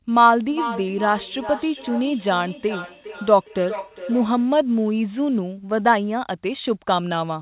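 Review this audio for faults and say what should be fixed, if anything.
Feedback echo between two devices, 0.48 to 4.53 s: speech comes back roughly every 400 ms, peaking about 10 dB below the original, as one device's microphone re-sends the other's playback. Unlike room reverberation, the repeats are discrete and evenly spaced. To prevent it, keep only one device in the room on the call, or mute the other's speaker and microphone.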